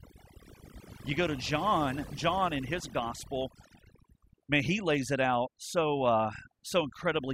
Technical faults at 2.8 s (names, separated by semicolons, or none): overdone noise removal